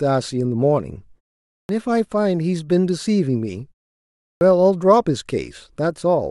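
At 1.65 s and again at 4.37 s, speech resumes with a clipped start after a pause. The output path has gone idle during the preceding silences, about 0.53 s and 0.72 s long, and needs roughly 41 ms to wake and relock. The opening of each phrase, 1.65 to 1.69 s and 4.37 to 4.41 s, is lost, so the speech starts abruptly without its first sounds.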